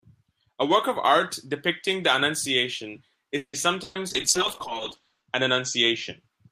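Speech carries three network faults close together. From 3.37 to 3.56 s a call audio freeze, likely from delayed packets draining the jitter buffer, stretches the last sound into a fading buzz or hiss and about 80 ms of silence. Speech resumes where it stopped, now running 160 ms later, with nothing lost. The burst of packet loss from 3.83 to 4.00 s sounds similar, a 120 ms held, fading fill, but speech resumes further on, with those 120 ms actually missing. From 4.10 to 6.24 s a call bitrate drop from 32 to 8 kbps makes the sound coarse and muffled, with the top end cut from 20 kHz to 8 kHz for about 1.1 s at its worst. This is a sustained change of tone rather than a gap.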